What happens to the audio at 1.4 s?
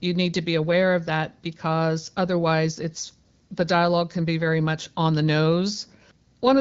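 Nothing goes wrong at 1.4 s: the speech there carries on intact, with only the light coloration of the AMR wideband (HD Voice) codec running at 12.65 kbit/s.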